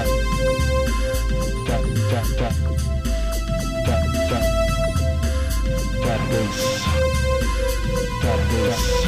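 No technical faults can be heard anywhere in the clip. There is nothing in the audio to place in time or to explain.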